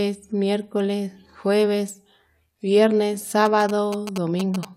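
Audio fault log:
3.45 to 4.65 s, GSM signalling bursts: a galloping dit-dit-dit of short buzzes, sitting roughly 10 dB below the speech. A nearby 2G phone is exchanging brief signalling transmissions, and the audio circuit rectifies the radio energy into a buzz repeating at about 217 Hz. Unlike steady mains hum, it arrives in clipped, rhythmic clusters that start and stop abruptly, and its buzz is harsh and pulse-like rather than a smooth tone.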